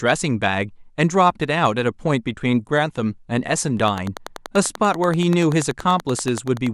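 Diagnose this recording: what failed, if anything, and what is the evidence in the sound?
A train of clicks runs from 3.88 s to 6.68 s: evenly spaced ticks at about 10.4 per second, roughly thirty in all, peaking around 10 dB above the speech and carrying on through the gaps. That steady, same-shaped pulsing is most likely interference from nearby equipment coupling into the analogue wiring.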